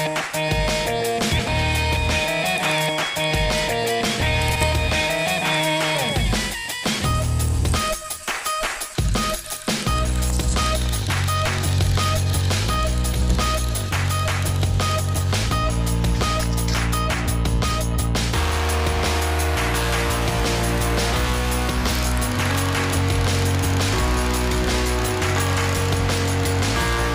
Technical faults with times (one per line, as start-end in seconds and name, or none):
1.31-1.49 frames out of order
4.49-4.64 frames out of order
7.54-7.70 frames out of order
13.13-13.32 frames out of order